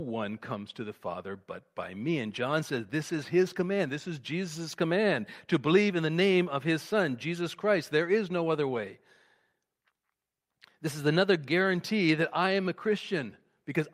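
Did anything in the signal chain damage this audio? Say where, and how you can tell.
No, nothing in the signal chain damaged this audio.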